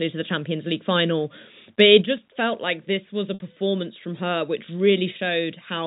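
At 3.34 s the speech breaks up for 60 ms, until 3.40 s. This is packet loss with pitch repetition. Audio went missing in transit, which fits three 20 ms packets. The receiver filled the hole by looping the last pitch period it had. That gives a brief held, buzzy tone. It fades out across the gap. The speech then comes back through a short cross-fade. The telephone band of the G.711 coding stays audible throughout.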